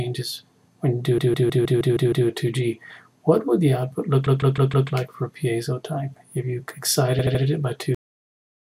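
From 1.18 to 2.28 s, repeated frames make the sound stutter: a block of about 157 ms (which fits a run of a few compressed frames) plays seven extra times, adding about 1.1 s. It happens again from 4.26 to 4.89 s, with the same block length played four extra times (0.63 s added), and from 7.19 to 7.42 s, where a 78 ms block plays three extra times (0.24 s added). In each case the stream delivered the same data again and the decoder replayed it. On a spectrogram each stretch shows identical slices tiled side by side. On the waveform it shows as exact copies.

At 7.95 s the audio has a cut-off end. It stops mid-sound because the final buffers never reached the output. The waveform drops straight to a flat zero line with no fade. On the spectrogram the energy ends in a hard vertical edge with no decaying tail.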